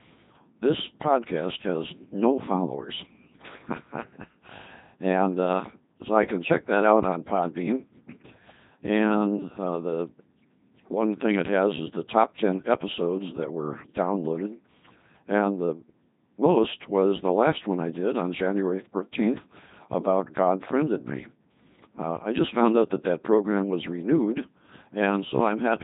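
From start to finish the speech has been through a Codec 2 vocoder, and it's heavily damaged: robotic, buzzy, rebuilt from sine waves rather than the real waveform, which fits a 2.4 kbit/s mode. There's nothing above about 3.8 kHz either.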